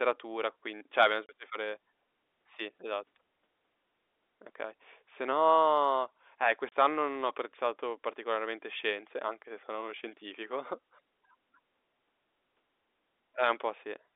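At 1.26 s and again at 6.69 s the speech drops out for 30 ms, packet loss filled with silence. Each gap fits one lost packet replaced by dead air, and the cut on either side is abrupt against the band-limited telephone sound.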